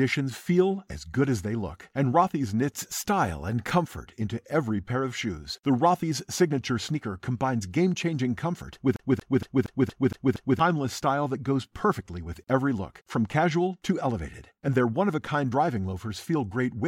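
From 8.96 to 10.59 s, the CD is stuck on one turn: the laser keeps jumping back, so a 233 ms slice of speech repeats seven times, with a brief mute at each jump.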